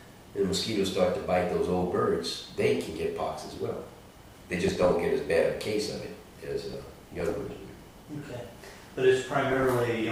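Bursts of noisy blips at 4.56–4.94 s, 6.73–7.61 s and 9.49–9.88 s are DAB burbling: weak-reception bit errors slipping past error correction into the MP2 audio data.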